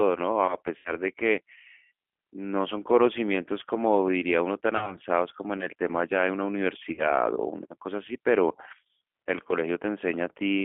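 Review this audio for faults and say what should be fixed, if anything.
The speech runs through the G.729 codec throughout. The band is held to roughly 300 Hz–3.4 kHz, and the rebuilt voice sounds plainly rough and synthetic, which fits G.729A at 8 kbit/s. A simple low-pass would only dull the sound, but here the buzzy grain comes from the pulse-based excitation. Carry the call on a wideband codec such as G.722 or Opus instead.

VoIP packet loss concealed by the speech codec occurs at 0.77–1.08 s (80 ms lost, which fits four 20 ms packets), 4.77–4.97 s (40 ms) and 6.92–7.24 s (60 ms). The decoder stretches the last pitch and filter into a buzzy tone or coloured noise that fades. Unlike a plain dropout, there is no silence or click, and the damage lasts past the gap while the predictor recovers. Add forward error correction or redundancy, and cut jitter on the network path.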